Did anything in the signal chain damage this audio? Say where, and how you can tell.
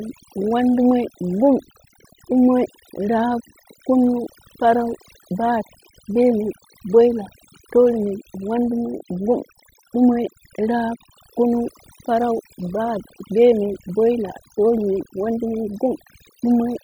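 Yes. The damage comes from overdone noise removal at the processing stage, and it runs through the whole speech clip. Between phrases the background collapses to near silence flecked with twinkling specks. A noise reducer set far too hard is switching individual frequency bands down whenever they sit near its noise estimate, taking quiet speech detail with them. A simple gate would mute everything at once, not leave these scattered tonal specks.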